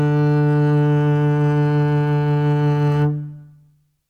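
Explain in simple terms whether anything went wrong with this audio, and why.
Nothing stood out as a problem when listening to this music.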